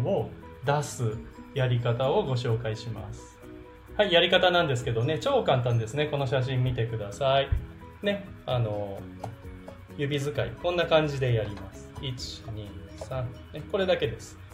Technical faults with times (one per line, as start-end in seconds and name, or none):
none